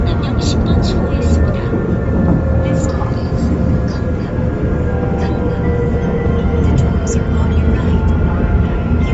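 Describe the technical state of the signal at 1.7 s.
At 1.7 s you're hearing Bluetooth LC3 compression, and it runs the whole clip rather than starting there. Nothing comes through above 7.7 kHz, and the damage is plainly audible: the top end has a breathy, grainy fizz where the codec has thrown away upper spectral detail and papered over it with noise. That's likely an LE Audio link, with the coarseness fitting a rate around 32 kbps in 10 ms frames.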